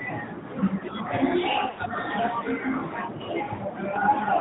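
It's a speech clip squeezed through the AMR narrowband mobile codec from start to finish. Everything above 4 kHz is gone, and the voice has that buzzy, synthetic edge that fits a mid-rate mode of around 10 kbps, where the vocal-tract model can't quite hide itself. You'll also hear lost AMR speech frames twice. From 1.70 to 1.80 s, about 80 ms of sound smears out and sags as the decoder repeats its last good settings at falling gain, which fits four dropped 20 ms frames. A shorter warbly dip follows at 3.54 to 3.61 s, consistent with two frames lost.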